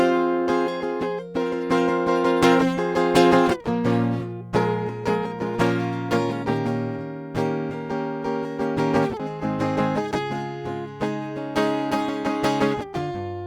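A music clip with sample clock jitter throughout: a faint hiss and roughness, roughly 50 dB below the music, that swells with loud and bright passages and disappears in quiet moments. That dependence on waveform slope separates it from steady background noise and points to timing wander of under a microsecond. At 9.19 s the music jumps abruptly forward with a small blip, likely a stream segment skipped by the player. A lost segment leaves the music continuing further on, where a dropout would have left silence or a freeze.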